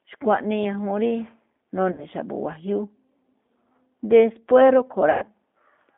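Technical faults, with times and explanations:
throughout: G.729 codec. The speech is confined to about 200 Hz to 3.6 kHz and sounds plainly rough and synthetic, which fits 8 kbit/s G.729A.
1.92–2.06 s and 5.10–5.29 s: VoIP packet loss concealed by the speech codec. About 60 ms and 120 ms of audio are missing, and the decoder fills each gap by extending the last pitch and filter. The result is a fading buzzy tone or coloured noise, followed by weak, distorted speech while the decoder recovers.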